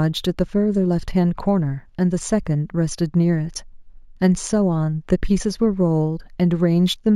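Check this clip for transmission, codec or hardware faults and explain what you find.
One fault runs through the whole clip: imaging from linear upsampling. The rate was raised by joining samples with straight lines, which fits a step from 16 kHz to 44.1 kHz. That weak filter dulls the top of the speech band and leaves a mirrored copy between 8 and 16 kHz, roughly 30 dB down, heard as a faint metallic shimmer on sibilants.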